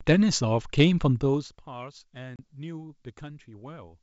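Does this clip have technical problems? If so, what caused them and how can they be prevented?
Yes. There is packet loss on an ADPCM call. From 2.36 to 2.40 s the speech drops into a hard-edged silent gap of about 30 ms, which fits a few lost packets. ADPCM sends only differences, so the receiver relies on its own running predictor and step size. The gap leaves those states out of step with the sender's. When the speech resumes, it comes back with a brief disturbance until the decoder settles a few tens of milliseconds later. Using packet loss concealment and resetting or resynchronising the decoder state after each gap would prevent this.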